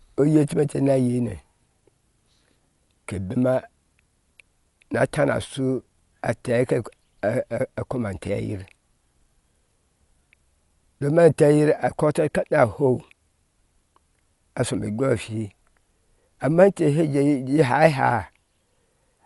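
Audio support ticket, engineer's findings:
Likely Dolby Digital compression at a low rate, fitting roughly 64 kbps, throughout. Band cut above 11.4 kHz, dropped lines refilled with noise: dull, rough, fluttering speech.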